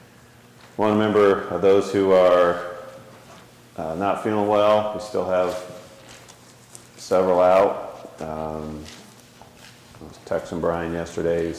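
Nothing stood out on listening to this audio.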